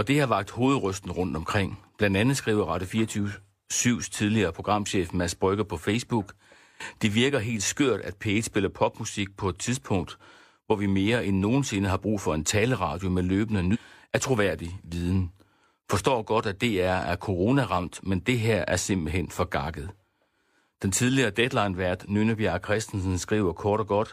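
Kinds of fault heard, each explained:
Stream segment skipped: Right after "en taleradio med løbende", between 13.70 and 13.76 s, the speech jumps forward with a brief blip, so the sentence does not continue where it left off. The likely cause is one chunk of a segmented stream failing to load, so the player moved on to the next. Unlike a dropout, which leaves silence and then resumes in place, this removes part of the programme.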